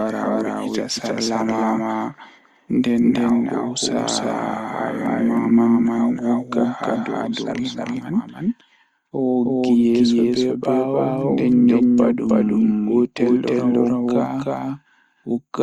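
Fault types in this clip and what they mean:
Doubled audio track: a slower second capture path likely mixes in another copy, so the speech repeats about 300 ms later at roughly equal loudness.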